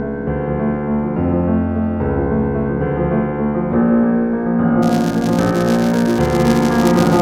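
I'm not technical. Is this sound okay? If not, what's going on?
No. From about 4.82 s until the end, there is a filter restarted on every block. The audio is processed in short chunks, and this filter forgets everything between chunks, so each one starts from silence. Every restart leaves a tiny click. Because the clicks repeat 200 times a second, which suggests chunks about 5 milliseconds long, they blur together into a buzz at 200 Hz laid over the sound, rising and falling with its loudness.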